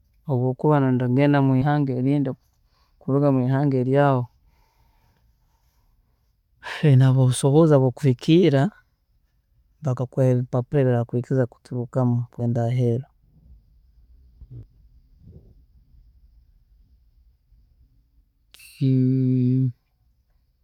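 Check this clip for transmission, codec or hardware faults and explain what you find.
Compressed frames skipped at 1.61–1.64 s, 10.73–10.77 s and 12.39–12.42 s. Whole frames never reach the output, so the speech jumps ahead by about 50, 70 and 100 ms, in steps that fit a 10 ms frame.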